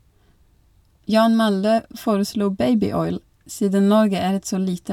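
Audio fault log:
No fault is heard in this speech clip.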